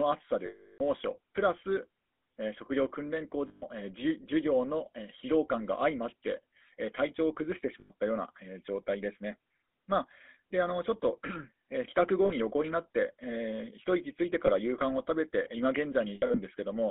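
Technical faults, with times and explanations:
throughout: GSM full-rate codec. Buzzy, gravelly roughness, consistent with 13 kbps, in a 250 Hz to 3.5 kHz band. Pulse-driven vocal-tract model, unlike the watery swirl of transform codecs.
0.46–0.81 s, 3.48–3.63 s, 7.80–7.91 s, 12.26–12.31 s, 14.46–14.50 s, 16.14–16.39 s: lost GSM frames. The last good frame is repeated, giving a metallic ring rather than a clean silent dropout. The final one is scattered, with runs up to around 70 ms.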